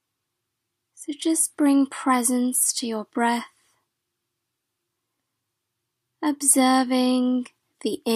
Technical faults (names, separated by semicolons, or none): none